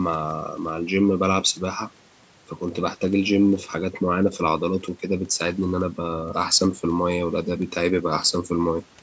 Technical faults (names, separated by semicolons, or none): none